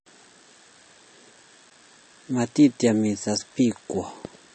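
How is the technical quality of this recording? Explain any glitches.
The recording has plainly audible codec damage throughout and two brief dropouts.

Throughout the clip, nothing is present above 8.3 kHz, and the audible damage is likely from MP3 compression at a low bitrate, consistent with roughly 38 kbps. An MP3 encoder divides the signal into many narrow frequency lines. When bits are scarce, it discards the weaker lines, which then flicker in and out from frame to frame, and it removes everything above a fixed treble cut-off. That produces the dull top end and the unstable, smeared texture heard here.

At 1.70 s and again at 2.79 s, there is a block of digital silence lasting 11.7 ms and then 5 ms. For those instants the output carried zeros in place of the sound. That happens either when the program fails to refill its output buffer in time or when a calculation yields invalid values. 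The audio stops and resumes abruptly with no fade. Because both gaps are shorter than about 15 ms, they come across as quick ticks or dips rather than audible holes.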